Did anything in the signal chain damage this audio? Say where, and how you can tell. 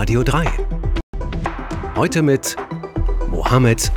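Yes. The damage happened at reception, in the digital broadcast decoder. There is a digital broadcast dropout from 1.01 to 1.14 s. The sound cuts to silence for about 130 ms, then resumes later in the programme rather than where it stopped. That hole fits roughly four lost frames of about 32 ms each. Frames were missed or failed their checksum, so the receiver muted until valid frames arrived. The audio sent during the gap is gone.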